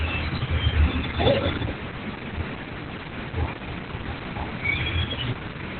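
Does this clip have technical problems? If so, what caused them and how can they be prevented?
Yes. Opus voice compression runs throughout: nothing above 4.2 kHz, plus hoarse, robotic speech from coarse SILK coding, unlike a clean low-pass filter, which fits roughly 8 kbps. Prevent it by encoding at a higher bitrate, such as 24 kbps or more, for wideband speech.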